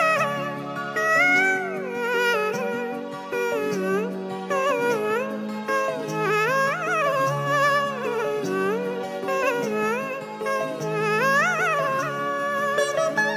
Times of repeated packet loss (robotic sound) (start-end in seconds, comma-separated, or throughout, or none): none